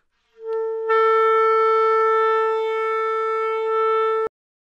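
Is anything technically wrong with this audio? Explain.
Yes. Throughout, the sound is dull and granular with a gurgling edge, likely MP2 compression at a low rate near 80 kbps: upper sub-bands switch off and the rest are coarsely quantised. Unlike burbling, it never lets up.

From 3.60 to 3.67 s, DAB burbling adds a brief disturbance. A few uncorrected bit errors corrupt about two frames, so short blips of noise appear in single sub-bands.

At 4.27 s, a cut-off end stops the sound mid-event into digital silence with no decay. The final buffers were never written, unlike a fade or natural ending.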